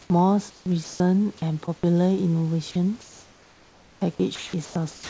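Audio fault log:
0.02–0.10 s and 3.01–4.01 s, comfort noise in place of the background: the room background, which sits about 30 dB below the loud parts, turns into a smooth, featureless hiss, briefly for 80 ms at the start and then for a full second. This most likely comes from discontinuous transmission. The sender stopped sending during the pauses, and the receiver filled them with synthetic noise that roughly matches the background. The level dips about 1 dB the first time and about 5 dB the second.
0.50–1.00 s, 1.38–1.83 s and 4.35–5.10 s, sound chopped by the voice detector: within each of these stretches the sound cuts in and out, and pieces are replaced by steady noise. About 320 ms is lost in the first stretch, 55 ms in the second and 461 ms in the last. This is likely caused by the sender's voice detector switching on and off more than once around quieter sound.
2.71–2.75 s, sound dropped by the voice detector: a 40 ms gap is filled with steady noise, and about 20 ms of actual sound disappears with it. 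The detector likely took a quiet edge of the sound for background and stopped sending. The receiver played comfort noise until the detector triggered again. The filler stays below the 8 kHz ceiling of the G.722 call path.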